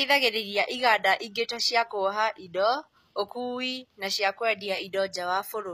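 Throughout the speech, s sounds turn gritty and metallic, likely from HE-AAC compression. On a spectrogram, the treble appears as copied, smeared patches ending sharply at 14.9 kHz.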